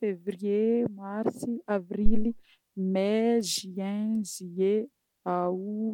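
At 2.06 s there's a phantom power thump. Someone switched phantom power (or some other supply) on or off on the live input, and that sudden DC step got through the coupling capacitors as a low, heavy bump. It hits about -9 dBFS, and it dies away fast, with a decay of about 54 ms. It's gone by around 2.30 s, leaving a short, dull thud in the speech.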